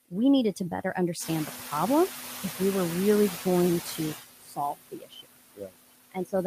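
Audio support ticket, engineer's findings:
Noise suppressor artifacts, whole clip: background pumped down about 19 dB between phrases and rising under speech. Suppressor gain is acting per frame. Spectrogram shows patchy, flickering low-level noise with speckle between bands.

Noise suppressor catching up, 1.2 to 1.56 s, right after "we needed to better": room noise steps up about 11 dB near 1.0 s and initially gets only about 6 dB of cut. The noise estimate lags, then adapts over 360 ms. Spectrogram shows a bright noise-floor band fading.

Speech cut by the noise suppressor, 4.38 to 5.26 s after "were really going to" (about 21 dB deepest, most of that span), 5.55 to 5.73 s (about 20 dB), 6.12 to 6.34 s (about 18 dB). Suppressor classifies weak speech as noise, swallowing it with the background. Waveform shows envelope dips. Spectrogram shows speech energy turned down along with the noise.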